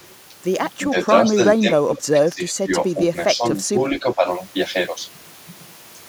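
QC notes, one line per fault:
0.02–0.07 s, echo leak: a very faint delayed copy of the speech, roughly 40 dB below it and trailing by about 406 ms, likely from a loudspeaker echo the far end's canceller missed. On a spectrogram it shows as a ghostly, offset replica of the harmonic bands.
0.91–1.12, 1.29–1.39, 1.61–2.73, 2.96–3.16, 3.34–3.54 and 3.71–4.26 s, speech suppressed in double talk: the speech dips in level, slightly at first, around 10 dB at 2.96 and 3.71 s, and deepest, roughly 15 dB, across 1.61–2.73 s. This is likely the canceller ducking during overlapping talk. The waveform envelope sags in those stretches, and the spectrogram dims there.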